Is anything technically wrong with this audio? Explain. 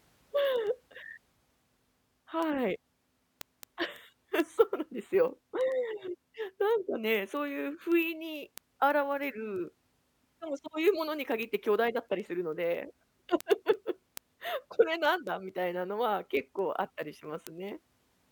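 Yes, there's a word clock tick problem running almost the whole clip, from about 0.12 s to 18.23 s. The receiving device is reading a digital link on its own clock instead of locking to the sender's, and the two drift apart by a couple of hundred ppm. Each time they slip, a single sample gets dropped or repeated, so you hear a steady ticking about every tenth of a second, roughly 150 ticks in all.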